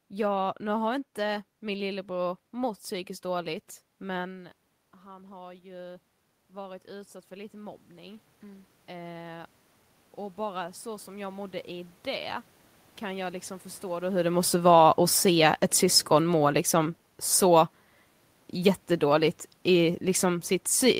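Just after "lillebror mått psykiskt dåligt", the speaker moves away and the level drops by about 17 dB. From 4.14 to 9.6 s automatic gain rising lifts voice and room noise together by about 11 dB, reaching "och bara så som"; the waveform envelope and the spectrogram's noise floor climb slowly together. After "liksom förstå då hur", when the talker comes closer, automatic gain falling pulls the level down by about 5 dB from 14.23 to 17.72 s. The waveform and the background both shrink gradually across that span.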